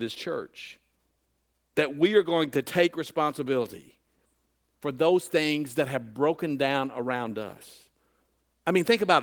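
No faults detected in the speech; the Opus voice compression path runs in hybrid mode at 20 kbps, fullband, with only light coding damage and nothing above 20.2 kHz.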